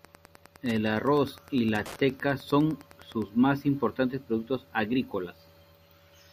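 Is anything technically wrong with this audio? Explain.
Yes, there's a problem. From the start to about 3.25 s there's Wi-Fi interference: the audio circuitry is picking up and rectifying a nearby Wi-Fi radio's beacon, so you get a steady tick every 102.4 ms, roughly ten a second, sitting about 25 dB under the speech.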